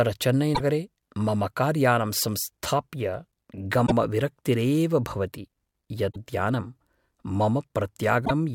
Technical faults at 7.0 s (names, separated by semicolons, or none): none